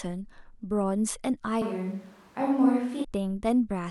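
A switch to a distant microphone runs from 1.62 s to 3.04 s. The speech abruptly turns roomy and hollow, with thinner low end and a level drop of about 5 dB, while a faint bed of room noise, roughly 35 dB below the speech, becomes audible. The close microphone's signal likely dropped out, leaving only a microphone farther from the talker that captures more room reflections. At 3.04 s the close, fuller sound returns just as suddenly.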